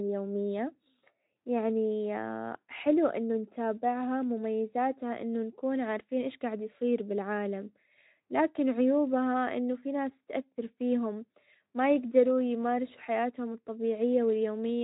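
No technical faults can be heard anywhere in the speech.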